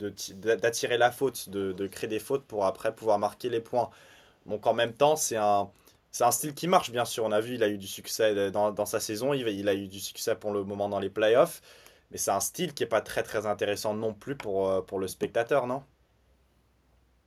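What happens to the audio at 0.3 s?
From 0.32 to 0.4 s a faint echo leak appears: a delayed copy of the speech, about 400 ms late and roughly 40 dB below it, returns briefly. The likely cause is a far-end loudspeaker whose echo canceller let some of its microphone pickup through.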